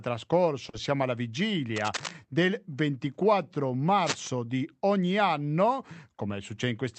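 Speech, heard through a call codec whose top end stops near 8 kHz. At 0.69 to 0.75 s, just before "siamo alla", there is short concealed packet loss. About 40 ms of audio never arrived in time. The decoder bridged the gap by extending the preceding sound and then blending back into the real signal. The result is a brief smear or wobble. Cable scratch noise appears twice. The first burst runs from 1.76 to 2.12 s, sitting about 10 dB under the speech. The second runs from 4.00 to 4.28 s, about 5 dB under, ending right before "di ogni anno". Both are dense, ragged crackles laid over the speech. The likely cause is a worn cable, connector or control being moved, so its contact resistance jumps around rapidly.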